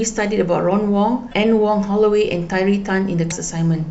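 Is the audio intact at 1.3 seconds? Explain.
No: damaged data in the compressed stream at 1.29–1.34 s makes the decoder lose sync and hunt for a header, producing a brief glitch.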